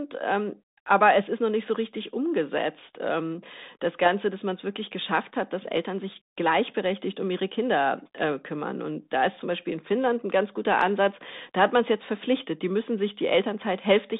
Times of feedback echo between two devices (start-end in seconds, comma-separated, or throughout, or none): none